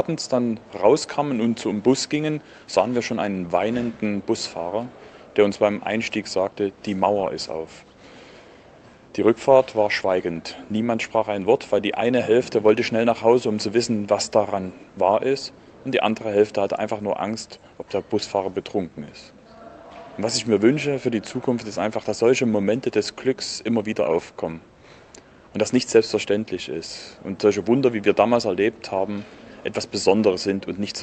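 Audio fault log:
No faults found; the high end stops at 8 kHz, which fits an Opus call link running at around 32 kbps as that path normally does.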